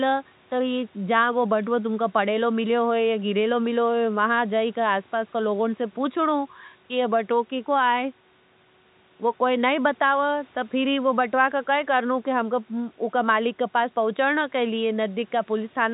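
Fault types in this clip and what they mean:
Nothing to flag here: the speech simply comes across with the usual narrow telephone sound, with the top end stopping around 3.8 kHz as ordinary phone-line coding would leave it.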